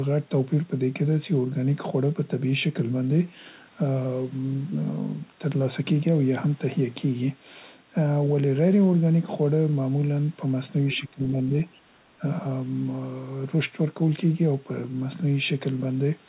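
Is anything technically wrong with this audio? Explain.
Yes. Two related faults show up between about 10.8 and 12.2 s, both in the band-limited audio, whose content stops at 4 kHz in a way that fits a narrowband telephone codec.

Speech suppressed in double talk occurs at 10.82–11.33 s, 11.84–11.93 s and 12.19–12.23 s. An echo canceller likely could not separate the local talker from loudspeaker echo while both sides were active, so it turned the microphone signal down. The speech dips sharply, by roughly 20 dB at its worst in the first stretch and less later, for about 300 ms, 100 ms and 40 ms.

The other side's voice leaking through appears at 10.92–10.98 s, inside the first suppressed stretch. The echo canceller likely left part of the loudspeaker signal in the microphone feed, so a brief scrap of a second voice comes through, about 20 dB below the main speech.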